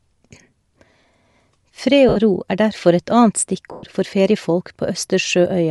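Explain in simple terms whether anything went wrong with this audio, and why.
Yes, two things went wrong. Throughout the speech there is a grainy, breathy hiss clinging to the voice, with the upper sparkle replaced by something closer to noise. That points to Bluetooth LC3 compression, likely squeezing the sound to fit a wireless link. Unlike ordinary background hiss, this grain is part of the voice itself, because the codec fills in the detail it threw away with noise.

There are also two short dropouts, from 2.09 to 2.17 s and from 3.72 to 3.83 s. These are lost LE Audio frames: pieces of the wireless stream never arrived, and the receiver patched each gap by repeating the last bit of sound it had, scrambled. The result is a brief noisy smear that fades rather than a clean silence or a sharp click, which is what separates it from a simple mute or a digital glitch. The lengths fit runs of 10 ms frames going missing.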